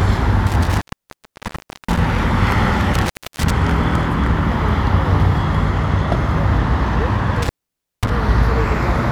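Intermittent contact drops the sound at 0.47–2.19 s, 2.94–3.51 s and 7.42–8.10 s. A loose connection opens for about 1.08 s, 0.30 s and 0.54 s, crackling at each edge.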